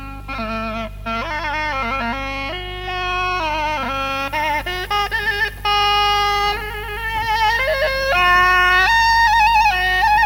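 No technical fault can be heard anywhere in the audio, which keeps a steady, intact signal throughout.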